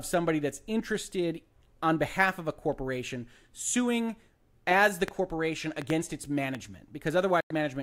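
Train of clicks from 5.08 to 6.56 s, just after "corporation suing as the" in this speech recording: about four similar clicks arrive irregularly, about two per second, standing well above the speech, likely from interference from nearby equipment. Digital broadcast dropout at 7.40 to 7.51 s: the receiver mutes with a 3 ms fade, losing about 96 ms of audio, which fits roughly three corrupted or missing frames.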